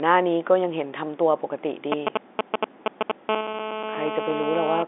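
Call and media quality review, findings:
GSM signalling bursts, 1.92 to 3.12 s: galloping dit-dit-dit ticks and short buzzes at 217 Hz, louder than the speech. Nearby 2G handset sending signalling bursts; audio circuitry rectifying the RF pulses into the baseband.

GSM phone buzz, 3.29 to 4.83 s: continuous hard, raspy 217 Hz buzz rich in harmonics, about 4 dB below the speech and unrelated to it. Nearby 2G handset transmitting steadily as in a call; RF bursts rectified by the audio path.

Packet loss with pitch repetition, 3.52 to 3.54 s: brief held, slightly buzzy tone where the speech should continue. The 20 ms gap is consistent with two lost packets. The receiver's concealment repeated the last pitch period to bridge it before normal audio resumed.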